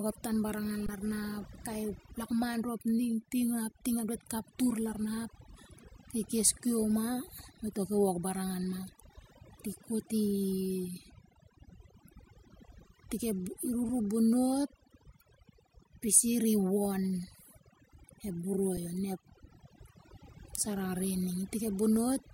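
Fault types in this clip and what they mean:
Overdone noise removal: A noise reducer was pushed too hard across the whole clip. It cuts individual frequency bands deeply whenever they sit close to its noise estimate. The quieter parts of the speech fall into those bands and vanish with the hiss. What remains between phrases is near silence, dotted with twinkling, chirpy specks. The speech itself has its softer detail stripped away.
Underrun with held sample: The playback buffer briefly ran dry, and the converter held its last output value until data came back. The waveform goes flat for a moment and the sound simply stops. The longest gap, about 21 ms, falls between "ep tan banangan" and "ralna ap kai" and fits a 1024-sample buffer. Shorter 5 ms holds come at 13.89 s and 18.77 s, fitting a 256-sample buffer. Playback resumes where it stopped, so each edge is soft rather than clicky.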